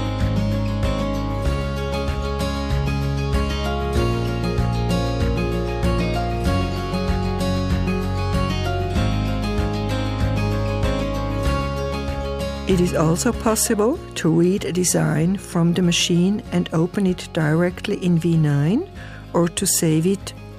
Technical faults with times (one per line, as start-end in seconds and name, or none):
none